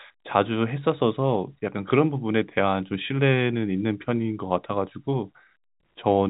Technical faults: none

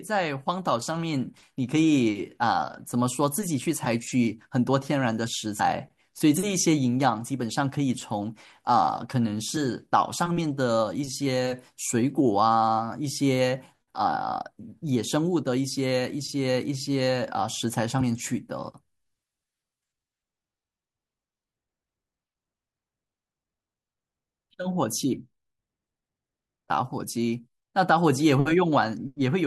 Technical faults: damaged data in a compressed stream

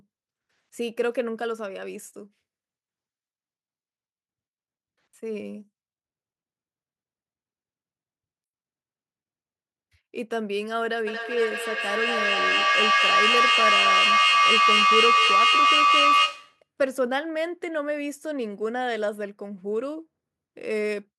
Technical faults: feedback howl

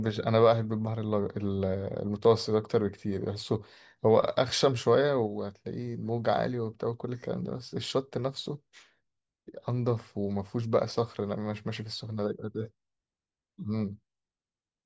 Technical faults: none

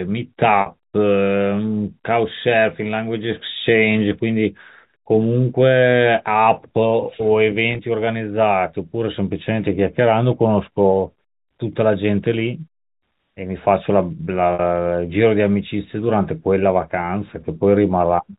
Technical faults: packet loss with pitch repetition

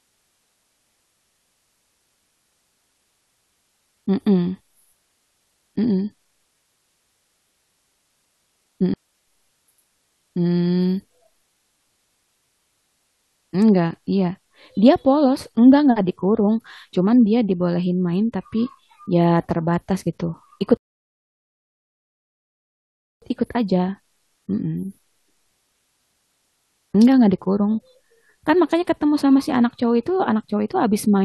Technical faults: digital wireless dropout; rebuffering stall

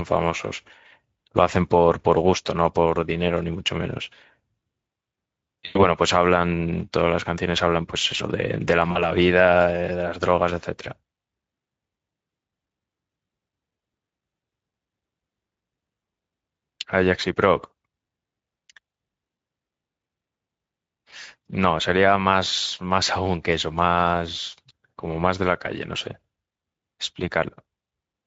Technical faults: Speex codec; VoIP packet loss concealed by the speech codec

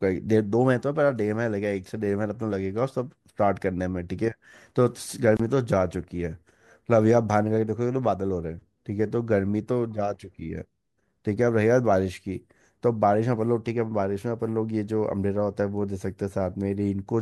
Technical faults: gap at a join of encoded pieces

